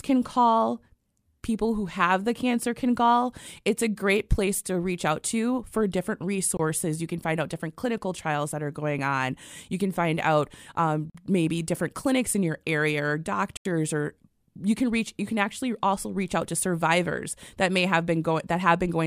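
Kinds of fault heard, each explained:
Block of digital silence: the speech cuts abruptly to dead silence three times. The gaps last 23, 46 and 84 ms, the first after "out to for different". The program likely missed filling its output buffer in time, leaving zeros.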